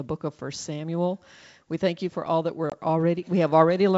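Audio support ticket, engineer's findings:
Packet loss on an ADPCM call, 2.70–2.73 s, right after "you for all that". Hard-edged 20 ms hole, about one packet's worth. Waveform: flat zero-line gap with abrupt edges. Spectrogram: full-band vertical blank stripe. On resume, decoder predictor and step size are out of sync with the sender's, so speech returns slightly distorted and settles within tens of ms. Wideband coding sounds like G.722 at full rate, with clear highs to 7 kHz.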